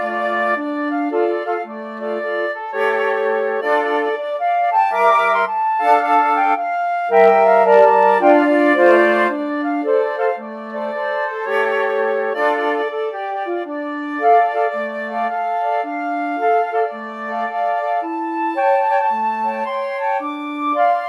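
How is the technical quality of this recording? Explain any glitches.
The recording has short bursts of hard clipping. At 7.17 to 7.30 s, 7.73 to 8.31 s and 8.83 to 8.93 s, peaks exceeded a stage's ceiling by about 2 dB (about 1 dB in the last), flattening them into crackly high harmonics.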